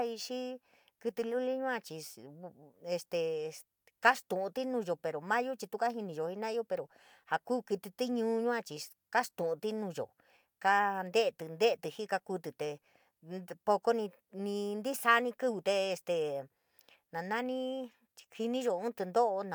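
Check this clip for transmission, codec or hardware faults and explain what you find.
Nothing wrong turns up anywhere in this speech recording.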